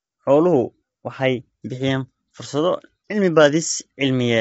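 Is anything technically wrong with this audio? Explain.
Yes. Throughout the speech there is plainly audible low-delay AAC compression, likely from AAC-ELD at a bitrate that sounds close to 24 kbps. Its short frames resolve the voice's pitch harmonics coarsely, so the speech comes across rough and grainy, with noise filling the gaps between harmonics. On a spectrogram the harmonic stripes look smeared and speckled, and all energy stops abruptly at about 7.8 kHz, leaving an empty band above.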